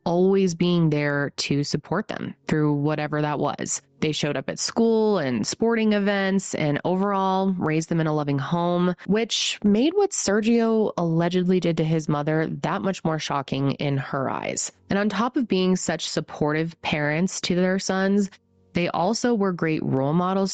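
Throughout the speech, the level swings by something like 10 dB. Loud and quiet passages sit unnaturally close together, so the whole clip sounds squashed. This is gain pumping, likely from input gain set far too high and a fast limiter or compressor clamping down on each peak, then releasing in the gaps. The call path caps the sound at 8 kHz.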